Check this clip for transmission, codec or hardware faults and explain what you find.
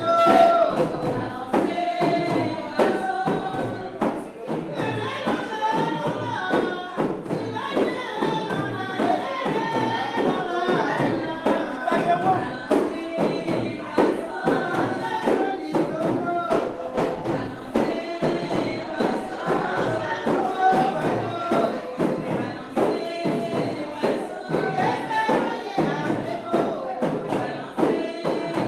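One fault is audible: a call bitrate drop from 16.52 to 21.61 s. The connection's bandwidth estimate fell, forcing the encoder to code with far fewer bits. The sound fits a fall from about 40 to 18 kbps, bottoming out for roughly 3.8 s. It turns coarse and muffled, and a spectrogram shows the high band thinning into blocky, smeared patches until fuller detail returns.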